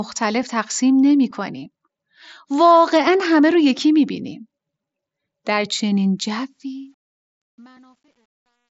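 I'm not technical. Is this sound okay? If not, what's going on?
No. The speech starts fading out at about 6.5 s, and from 6.49 s to the end at 8.74 s the fade carries truncation distortion on a fade. The volume-lowering step keeps too few levels of loudness, which fits a stage working with only 10 bits. As the sound gets quieter, it turns gritty. From about 7.24 s to the end the grit is at its worst instead of the sound gently disappearing. A correctly made fade would just get smoothly quieter. The slightly dull, phone-like tone heard throughout comes from the Bluetooth mSBC headset codec, which stays the same across the whole clip. The grit, by contrast, appears only as the fade gets quiet.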